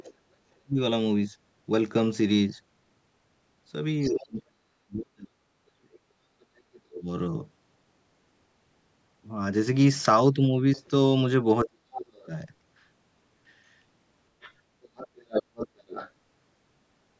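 A second, fainter voice sits under this speech clip at 0.0–0.14 s, 4.03–4.21 s, 5.92–6.8 s, 12.14–12.25 s and 14.41–16.11 s. It is strongest, only about 10 dB below the talker, at 4.03 s and from 14.41 s, and elsewhere around 25 to 30 dB down. This is the other side's voice leaking through, likely loudspeaker echo that the echo canceller failed to remove. The talker's own speech also ducks sharply, by up to about 40 dB, at 0.46–0.78 s, 4.08–7.08 s (around two seconds in all) and 11.64–12.31 s. This is speech suppressed in double talk, likely the canceller turning down both voices while both sides spoke. The call microphone processing leaves nothing above 8 kHz.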